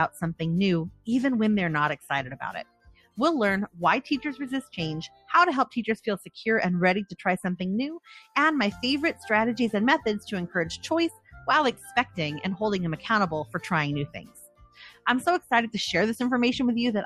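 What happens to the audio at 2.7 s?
At 2.7 s the sound falls inside a sound cut by the noise suppressor, running from 2.64 to 3.18 s. The suppressor judged this stretch to be noise and pulled it down by as much as about 20 dB, so sustained parts sink and tails end early while sharp onsets survive. On a waveform the envelope caves in for about half a second; a spectrogram shows the energy thinning abruptly, with only attack transients left standing.

Beneath that sits the noise suppressor applied to music or sounds, which is active across the whole clip. A speech-oriented suppressor treats steady content and reverb as noise, so gain swings of roughly 10 dB make the level pump and flutter. Spectrograms show patchy, gated-looking decays rather than smooth fades.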